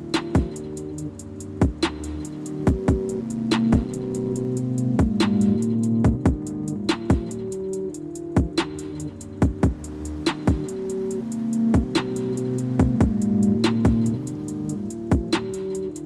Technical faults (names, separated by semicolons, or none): overlap-add ripple